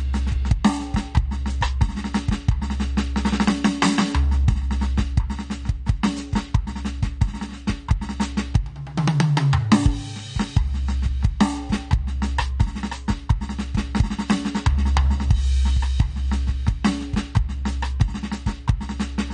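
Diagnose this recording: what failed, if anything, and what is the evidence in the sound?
Dull, smeared music with a warbling, fizzy texture throughout points to the codec stage: likely AAC compression, with damage consistent with roughly 32 kbps AAC-LC.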